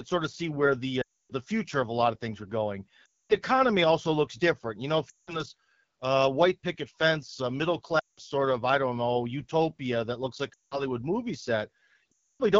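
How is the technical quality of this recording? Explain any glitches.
Quality's poor: rough, band-limited phone audio with six audible dropouts.

The AMR wideband (HD Voice) codec runs throughout. It's rasp and grit, which fits the low 8.85 kbit/s mode, where the pulse-driven speech model is starved of bits.

Lost AMR speech frames hit at 1.01–1.32 s, 3.05–3.36 s (after "of things were going", before "also looks different"), 5.09–5.41 s (after "know if", before "white picket fence middle"), 7.99–8.20 s, 10.53–10.84 s (after "utopia that looks like") and 12.12–12.42 s. Each time the decoder replays its last good settings at falling gain, so the sound drops to near silence within two frames and comes back weak.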